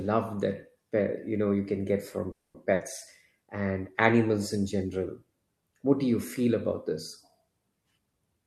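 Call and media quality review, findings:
Call audio freeze, 2.31 to 2.56 s, right after "know you can get": sound stalls, brief fading fill, then about 210 ms of silence. Likely jitter buffer underrun from delayed packets. About 230 ms inserted, nothing lost, and playout delay grows by 230 ms.

Burst of packet loss, 2.74 to 2.82 s: a short held, decaying fill, then the sound resumes further along. The receiver's concealment covered 60 ms, and 60 ms of the original audio is missing.

Jitter buffer speed-up, 7.98 to 8.43 s: speech rushes at about 115% speed with pitch unchanged. The jitter buffer was draining excess delay by dropping pitch-period segments, about 70 ms in total.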